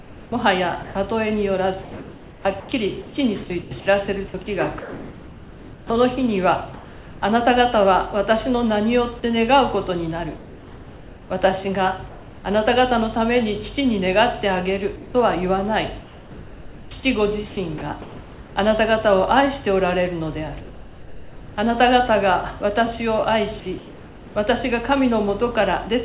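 From the start to 7.22 s the sound is choppy: quiet edges keep vanishing and are replaced by a flat hiss, about 3.1 s of it replaced in all. This is sound chopped by the voice detector, likely because the sender's detector kept switching off and on, so the gaps were filled with comfort noise. The same choppiness returns from 14.96 to 18.56 s, with about 1.7 s filled.

Between 10.37 and 12.44 s the background loses its detail for about 1.3 s and turns into a steady, featureless noise. This is comfort noise in place of the background, likely because the sender stopped transmitting during a pause and the receiver synthesised a rough match. It happens again from 20.6 to 21.56 s. There, the background sits about 19 dB below the loud parts, and the fill is about 3 dB quieter than the real background.

At 23.6 to 23.66 s a brief sliver of sound, about 40 ms, is swallowed and replaced by steady noise. 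This is sound dropped by the voice detector, likely because the detector mistook that quiet sound for background and cut transmission early. Synthetic fill then continues to 24.35 s, replacing about 0.6 s of background in all.

Throughout, nothing is heard above 4 kHz, which fits the narrowband G.711 call path.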